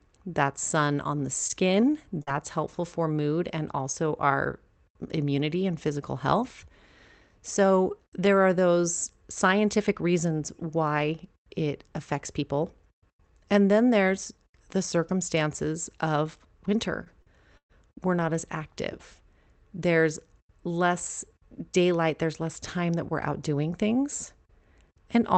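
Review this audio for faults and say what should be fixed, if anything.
At 1.47 to 1.53 s there is a short stall from a late packet. The jitter buffer ran dry, so the receiver held the current speech sound for about 22 ms until the packet arrived. Nothing is lost, but that sound drags slightly and playout delay grows by 22 ms. Allowing a little more jitter-buffer headroom would prevent it.

At 1.50 to 1.54 s and again at 2.27 to 2.31 s, a lost packet was rebuilt from error correction. Opus in-band FEC rebuilt 40 ms each time from the low-bitrate copy carried in the following packet, so there is no gap, but those frames sound grainier and noisier. Reducing packet loss on the network path would prevent it.

At 2.23 to 2.30 s there is a short concealed packet loss. About 40 ms never arrived, and the decoder covered it with roughly 37 ms of extrapolated sound before crossfading back. This is heard as a brief smear in the speech. 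Stabilising the network link, or adding redundancy beyond FEC, would prevent it.

From 17.04 to 18.22 s there is repeated packet loss (robotic sound). There are three gaps, the longest 118 ms, and about 15% of the stretch is concealed. Some of the loss was patched from FEC, roughly 70 ms in total. The result is choppy speech with fragments missing. Reducing the packet loss behind these bursts would prevent it.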